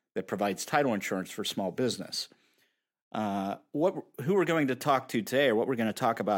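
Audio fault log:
No technical faults can be heard anywhere in the speech signal.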